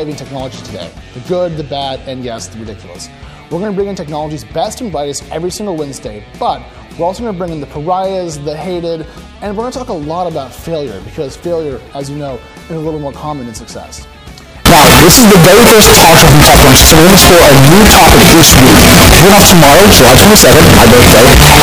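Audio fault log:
14.66 to 21.62 s, float read as integer: from 14.66 s to the end, the audio turns into a harsh, very loud, almost square-edged roar sitting at an almost fixed, high level. Quiet background comes up as loud as the main sound, though the pitch still tracks underneath. The likely cause is 32-bit float samples being read as 32-bit integers, so each sample's sign and exponent bits, not its actual level, set the output value.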